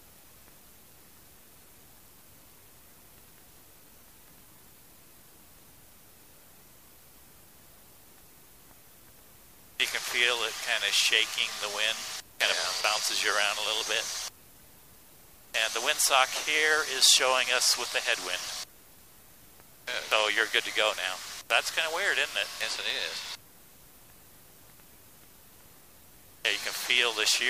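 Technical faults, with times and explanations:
Nothing stood out on listening, and no technical fault was heard anywhere in the audio.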